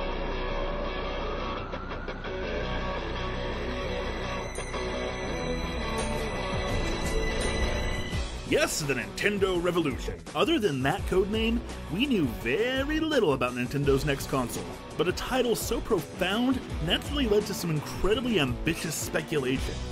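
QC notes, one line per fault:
No faults detected on this pass.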